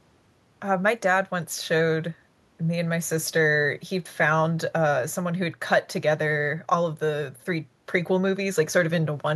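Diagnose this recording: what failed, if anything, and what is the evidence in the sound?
Nothing in this speech recording points to a failure at any stage of the chain. The sound gives no evidence of a fault that would need tracing back to a cause.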